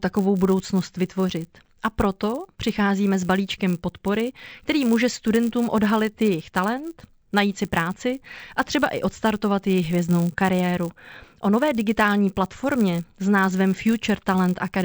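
A steady 100 Hz buzz rides under this speech recording from start to finish, present only while there is signal. It comes from a resampler restarted on every block: converting from 16 kHz to 48 kHz in separate 10 ms blocks leaves a small error at each edge, repeating 100 times per second.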